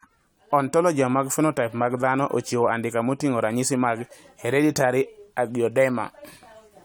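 No technical faults are audible.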